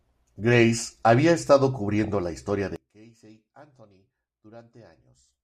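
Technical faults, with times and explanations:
1.99–2.10 s, DAB burbling: right after "había estado" and before "la historia", the speech breaks into brief burbling. Bit errors at a rate of a few tenths of a percent slipped past error correction, corrupting sub-band samples so individual bands carried short blips of noise.
2.76–5.44 s, one channel inverted: from just after "la historia" the voice sinks by about 27 dB to a faint remnant. The likely cause is one stereo channel with reversed polarity, so the centred voice, common to both channels, cancels when summed to mono, leaving only their small difference.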